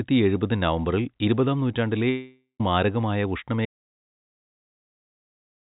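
At 2.1 s, just after "എഴുപത് നവംബറിൽ ഇരുപതാം നൂറ്റാണ്ടിലെ", the speech breaks off. For about half a second the last sound is stretched into a fading, buzzy continuation. That fill then gives way to roughly 120 ms of silence. The speech returns at 2.61 s, and about 500 ms of it is gone. This is a long network dropout. The likely cause is packets that never reached the receiver, so it covered the gap itself. Throughout, nothing sounds above 4 kHz, which fits a G.711 call path.

At 3.65 s the sound cuts out mid-flow. From there to the end of the clip there is silence. No room tone or background noise remains. This is an audio dropout to silence. The input was likely lost, through a failed link, a disconnected device or a mute, while the recorder kept writing silence. Whatever followed that point is missing entirely.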